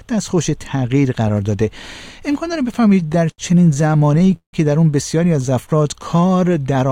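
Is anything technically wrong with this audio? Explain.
Yes, three faults can be heard.

From 1.1 to 2.6 s there are GSM signalling bursts. A nearby 2G phone is exchanging short bursts with the network. The audio circuit rectifies that radio energy. The result is a galloping run of brief 217 Hz buzzes, about 25 dB below the sound.

From 2.69 to 4.55 s there are repeated stalls, heard as stutter. Packets arrived late and the jitter buffer kept running dry. The receiver stretched the last sound across 22 short gaps, the longest 169 ms. About 438 ms was filled, a quarter of that span. Nothing is lost, but the audio drags and hiccups.

From 5.50 to 6.45 s there is a jitter buffer slow-down. The buffer was building reserve by repeating single pitch periods. That added 94 ms. The sound plays at 91 percent speed with unchanged pitch, drawn out.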